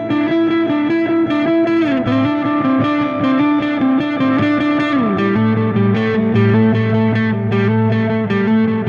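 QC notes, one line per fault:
No faults to note.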